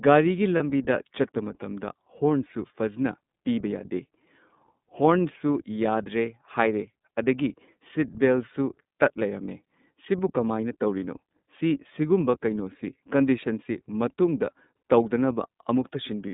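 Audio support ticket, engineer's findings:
iLBC codec on the whole speech path: narrowband coding with about 150 Hz to 3.7 kHz passband, nothing above. Plainly audible codec damage, rough, synthetic texture consistent with 30 ms frames, around 13.3 kbps.

Lost iLBC frames, 0.56 to 0.61 s: one dropped packet, around a single 30 ms frame. Decoder concealment repeats last pitch cycle with noise, giving a brief held, buzzy vowel. Clean recovery immediately after.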